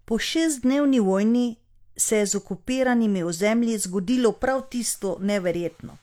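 No audible technical faults.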